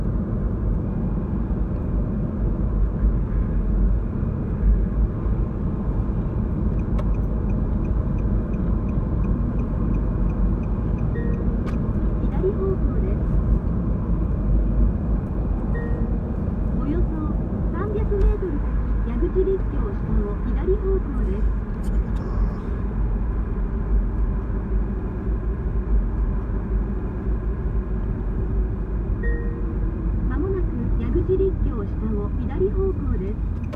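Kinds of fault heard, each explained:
Stream segment repeated: about two seconds of audio play again from 25.82 s, with a small blip at the jump back, because the player queued the same segment twice.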